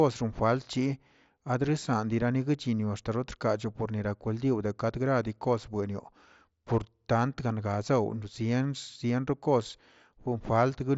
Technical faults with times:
none

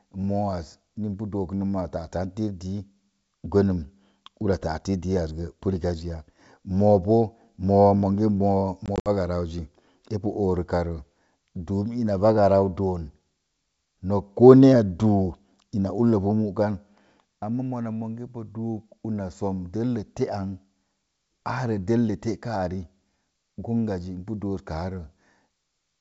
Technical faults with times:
8.86-9.09 packet loss on an ADPCM call

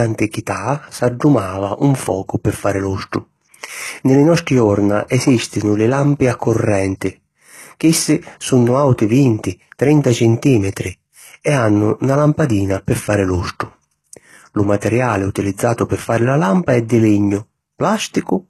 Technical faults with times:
0.00-18.49 low-bitrate audio saved at a high bitrate

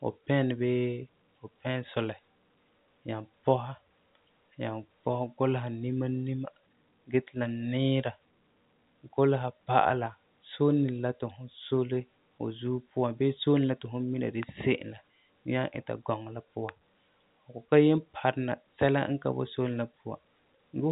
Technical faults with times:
none

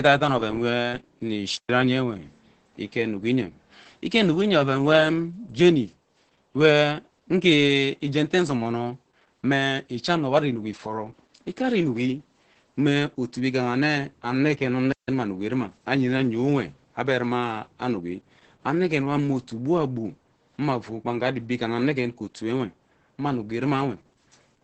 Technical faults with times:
0.00-24.64 Opus voice compression
1.57-1.69 digital wireless dropout
14.92-15.08 digital wireless dropout

